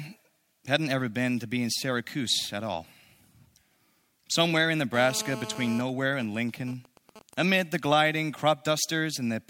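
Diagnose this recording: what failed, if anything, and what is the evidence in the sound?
A hard, raspy buzz at 217 Hz, rich in harmonics and unrelated to the speech, runs from 4.94 to 5.81 s at about 12 dB below the signal. This is GSM phone buzz in the analogue wiring: a nearby 2G phone in a call pulses its transmitter, and the audio circuit rectifies those radio bursts.

From 5.89 to 7.34 s, just before "amid the gliding", even ticks with a longer 217 Hz buzz twice a second sit roughly 20 dB down. These are GSM signalling bursts, again rectified in the analogue path, from a phone in a call whose user has gone silent, so it sends only short groups of bursts.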